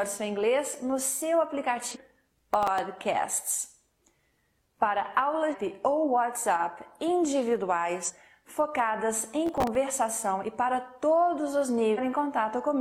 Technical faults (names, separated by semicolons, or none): damaged data in a compressed stream; processor overload crackle